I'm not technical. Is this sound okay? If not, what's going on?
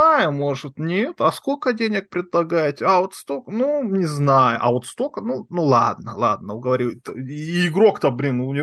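Yes, nothing stood out as a problem when listening to this recording.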